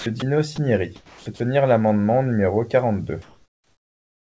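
Sound dropped by the voice detector at 0.00–0.06, 0.20–0.22, 0.56–0.58, 0.96–1.26 and 1.36–1.40 s: speech gives way to steady noise, likely because the sender's detector mistook it for background and stopped sending. Comfort noise in place of the background from 3.22 s to the end: the real background, about 45 dB below the loud parts, becomes featureless synthetic noise roughly 1 dB quieter. Throughout, nothing sounds above 8 kHz, which fits a G.722 call path.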